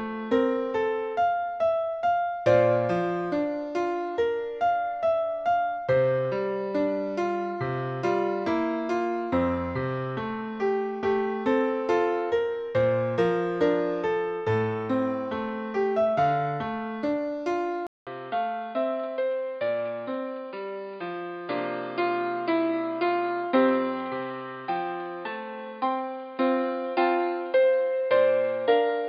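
At 17.87 s the audio drops out for about 200 ms, then returns duller, slightly quieter, cut off above 4.9 kHz, with faint new background noise, likely an input switched to a poorer device.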